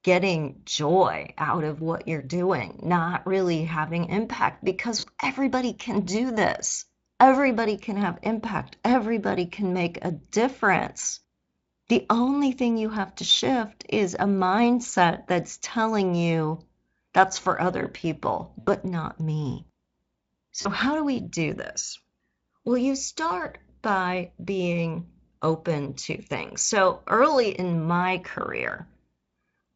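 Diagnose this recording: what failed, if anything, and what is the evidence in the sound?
Network stage, so VoIP packet loss concealed by the speech codec. At 4.99 s, just after "really having impact because", the sound smears into a short buzzy or noisy, fading stretch of about 40 ms before "everybody can do this". A longer one runs 18.59 to 18.70 s, after "that's for other people", and another hits 20.61 to 20.68 s, right before "how do we do". The decoder is papering over missing packets by extrapolating and fading, through the Speex path, whose coding is light.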